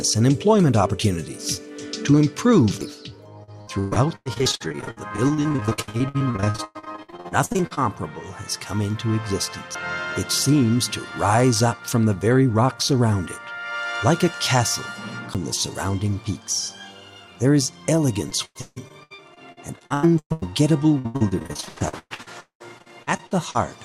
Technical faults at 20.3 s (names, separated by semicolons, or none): repeated packet loss (robotic sound)